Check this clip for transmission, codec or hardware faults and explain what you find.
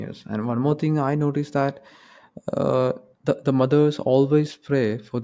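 No fault can be heard anywhere in the speech. There is nothing here to locate in time or trace to a cause.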